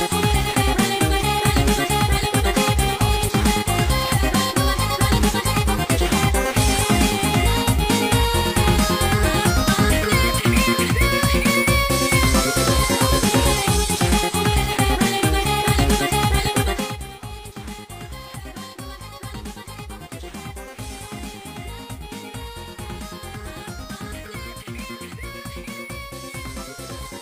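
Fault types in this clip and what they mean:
No faults found in this clip.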